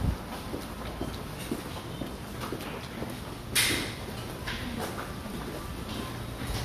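No audible faults anywhere in this recording of sounds: no dropouts, level jumps or interruptions, and the signal holds steady throughout.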